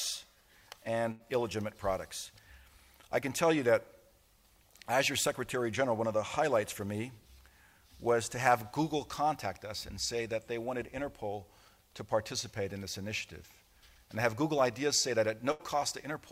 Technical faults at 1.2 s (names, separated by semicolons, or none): burst of packet loss